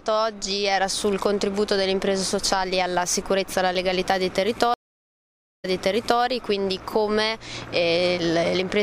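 Stream reconnect, 4.74 to 6.22 s: the connection dropped, leaving 0.9 s of silence. A fresh decoder then resumed 0.58 s earlier, repeating audio.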